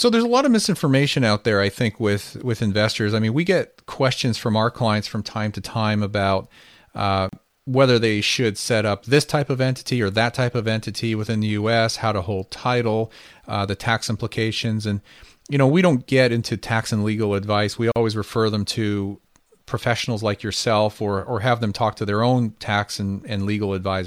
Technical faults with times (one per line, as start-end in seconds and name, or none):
7.29-7.33 gap at a join of encoded pieces
17.92-17.96 gap at a join of encoded pieces